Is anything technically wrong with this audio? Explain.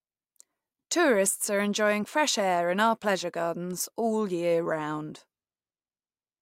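Yes. Word clock ticks run from 0.46 to 6.14 s, roughly every 0.7 s, about seven in all. The receiver isn't locked to the sender's clock, so as they drift apart by a few tens of parts per million, samples are periodically slipped. That produces sharp clicks of uneven strength. They show as thin vertical lines across the spectrogram and single-sample discontinuities in the waveform.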